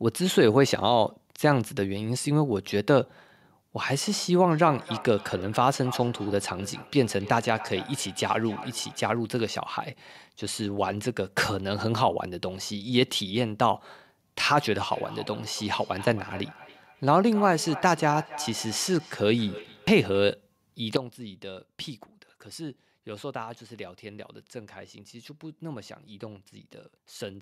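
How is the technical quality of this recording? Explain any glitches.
The recording has two kinds of glitch: a repeating echo in two stretches, and an abrupt drop in level near the end.

From 4.51 to 9.2 s and again from 14.91 to 20.33 s, the speech comes back roughly every third of a second, peaking about 15 to 16 dB below the direct voice. Each return sounds thinner and more ringing. This is feedback echo between two devices: one device replays what the other's microphone sent, and that microphone picks it up again.

At 20.97 s the speech and background noise fall together by about 12 dB and stay down to the end. This sudden gain jump was likely caused by a digital gain setting applied in one step instead of being ramped.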